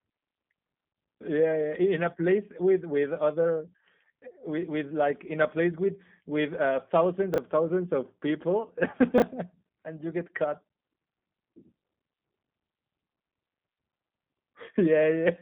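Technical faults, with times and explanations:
Throughout, G.729 codec: the speech is thin, slightly rough and synthetic, with plainly audible coding damage and nothing above 3.5 kHz or below about 150 Hz. The coder rebuilds each short frame from a vocal tract filter, a pitch estimate and a few pulses, so natural detail is replaced by a buzzy approximation. The narrow telephone band and this texture fit an 8 kbit/s G.729A link.
7.34 to 7.38 and 9.18 to 9.22, chunks out of order: each spot produces a brief garbled stutter. The first falls between "with with uh thousands" and "thousands of people", and the second comes right after "thousands of people". In each case a 20 ms slice of audio plays one slot late, after the slice that should follow it. Nothing is lost, but the reversed order creates three hard joins, and those joins cause the jumbled moment.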